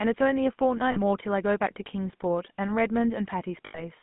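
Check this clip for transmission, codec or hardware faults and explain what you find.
Two faults affect this speech. A GSM full-rate codec runs throughout, and there are two bursts of lost GSM frames.

Throughout, the GSM full-rate codec gives a buzzy, gravelly roughness. The rough sound fits a 13 kbps pulse-excited vocal-tract model, and the spectrogram shows energy confined to 150 Hz–3.5 kHz.

At 0.92–0.98 s and 3.66–3.84 s, lost GSM frames hold the last good frame's settings. This produces a metallic ring, seen as smeared bands on the spectrogram.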